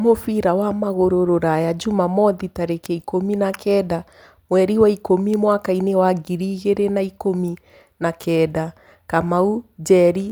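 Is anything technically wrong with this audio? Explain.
Yes. Word clock ticks run from 0.38 s to 10.30 s: around ten brief ticks at a steady spacing of roughly one and a half seconds through the speech. The receiving device seems to be clocking a digital link independently rather than locking to the sender. Each time the two clocks drift a full sample apart, one sample is dropped or repeated and its neighbours are misread, leaving a sharp tick. That spacing fits a clock mismatch of roughly 15 parts per million.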